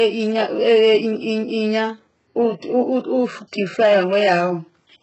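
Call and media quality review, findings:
HE-AAC compression, whole clip. Treble present but synthetic: sibilants gritty, metallic, lispy; nothing above 8 kHz. Likely HE-AAC encoder, heavy damage fitting roughly 8 kbps. Spectral band replication copies lower bands upward, so upper harmonics misalign. Unlike a plain low-pass, brightness remains, just wrong.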